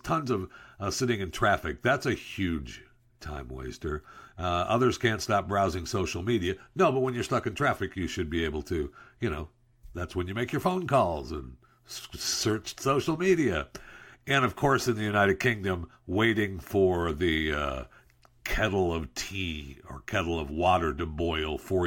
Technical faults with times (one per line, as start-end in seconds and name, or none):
none